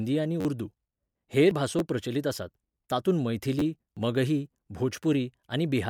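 Speech with short stutters and skips. At 0.41–0.45 s, 1.79 s and 3.59–3.62 s, a tiny slice of sound repeats with hard joins, four, one and two extra times, giving a brief buzzy stutter. This is a repeated buffer: new audio arrived late, so the last 10.67 ms piece, which fits a 512-sample buffer, was replayed. The 1.79 s event falls between "हेर भासो" and "प्रचलित आसात तातूंत", and the 3.59 s one comes just after "भासो प्रचलित आसात तातूंत". At 1.51 s, just before "भासो प्रचलित आसात तातूंत", and again at 3.97 s, around 40 ms of sound vanishes with a seamless jump. The 2.5 s spacing points to audio missing between chunks, likely dropped as the processor closed one chunk and opened the next.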